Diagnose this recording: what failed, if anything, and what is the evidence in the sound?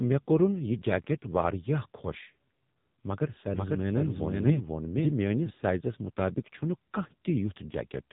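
The speech sounds buzzy and synthetic throughout, with a hard ceiling near 3.8 kHz and nothing above it. That points to the codec stage: an AMR narrowband mobile codec, where 8 kHz sampling removes the upper band and a vocal-tract model driven by sparse pulses rebuilds each 20 ms frame. The heavy roughness fits one of AMR-NB's low modes, around 6.7 kbps, where too few bits remain to carry natural texture.

From 3.54 s to 5.5 s a second, full-band copy of the same sound runs about half a second behind, at roughly the same level. It has no decay or room colouring and cuts in and out abruptly at those times, so it is not an acoustic echo. This is a doubled audio track, likely from a slower capture path or an edit overlapping two out-of-step copies during playback or storage.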